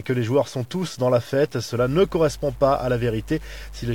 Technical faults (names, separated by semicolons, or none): low bit depth without dither; mains hum